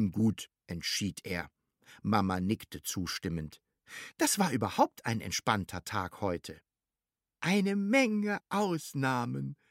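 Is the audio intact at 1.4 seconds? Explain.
Yes, the audio is intact at 1.4 seconds, with no dropout, click, distortion or other fault at that moment.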